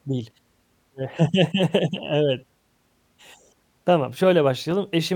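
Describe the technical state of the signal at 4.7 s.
At 4.71 s there is a brief jumbled moment in the speech, a tiny garbled stutter rather than a clean continuation. This is chunks out of order. A slice of about 5.8 ms arrived one chunk late and plays after the chunk that should have followed it. No audio is missing, but the swapped sequence creates three abrupt joins.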